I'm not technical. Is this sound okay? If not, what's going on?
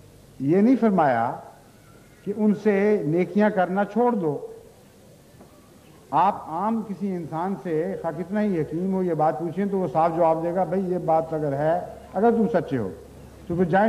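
Yes, nothing about this sound stood out as a problem when listening to it.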